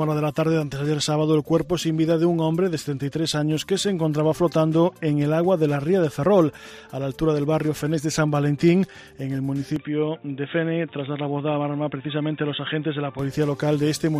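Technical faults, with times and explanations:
9.76–13.19 s, input switched to a poorer device: The sound abruptly turns dull and boxy, with nothing above 3.8 kHz, then clears again. There is no gap at the switch and the level barely changes. A faint new background noise appears. The likely cause is a narrower-band input device taking over.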